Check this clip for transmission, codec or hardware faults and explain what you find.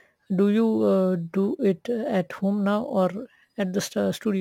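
There's one fault, and it runs through the whole clip: crude rate conversion. The speech sounds like it was moved from 44.1 kHz to 48 kHz by simply repeating the nearest sample now and then, with no filtering. Those repeats fall in a regular pattern set by the two rates, so the error makes shifted, inharmonic copies of the voice, sitting roughly 35 dB down. You hear it as a gritty fizz riding on the louder and brighter parts of the speech.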